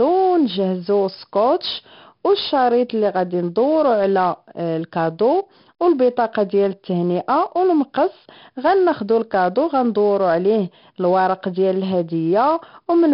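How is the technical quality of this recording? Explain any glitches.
The recording has clear, heavy 4-bit ADPCM compression damage throughout the speech. The codec stores each sample as a 4-bit step from a predicted value, so every loud passage carries a gritty hiss whose level rises and falls with the speech. Sharp onsets distort where the adaptive step size lags behind. Nothing is present above about 5.3 kHz, which suggests a low sample rate near 11 kHz and fits a data rate of about 44 kbps. The result is dull and rough.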